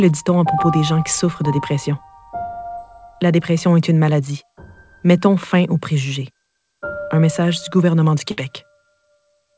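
Short concealed packet loss at 2.76 to 2.79 s: a fragment of the stream arrived too late for the decoder, so the receiver extended the preceding sound for about 13 ms before easing back into real audio, and about 20 ms of the original never plays. The patch is brief enough to register as a small smear or wobble rather than a dropout.

Burst of packet loss at 8.31 to 8.39 s: a longer run of audio failed to arrive in time. The receiver stretched the last sound for about 62 ms and let it fade as the gap went on, producing a held, decaying buzz or hiss. Playback then picks up later, with about 60 ms of material skipped outright. Both events sit inside a band-limited call path with nothing above 8 kHz, which fits G.722 at 64 kbps.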